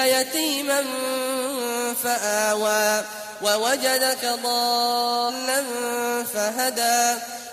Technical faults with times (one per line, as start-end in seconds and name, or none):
5.25-5.31 stream segment skipped